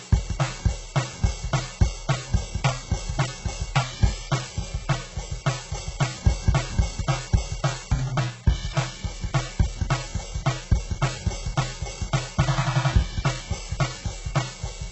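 A USB whine runs under the music from start to finish. It is a steady tone at 1 kHz, with its strongest component at the harmonic, 2 kHz. It sits roughly 40 dB below the music. The pitch never wanders. That fixed pitch points to the 1 ms frame timing of a USB bus. Current drawn in those frames has leaked into the audio through a shared power or ground path.

The whole clip also sounds heavily damaged by data compression. Nothing is present above 8 kHz. The upper range that remains is synthetic, with a gritty, metallic edge on cymbals and sibilant sounds. The likely cause is HE-AAC coding at a very low bitrate, around 8 kbps. That codec rebuilds treble by copying lower bands upward, so the overtones no longer match the original.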